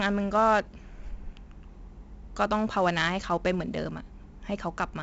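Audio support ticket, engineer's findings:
4-bit ADPCM compression, whole clip: gritty hiss riding speech level, harsh onsets where step adaptation lags, nothing above 7.8 kHz. Heavy damage, consistent with 64 kbps ADPCM.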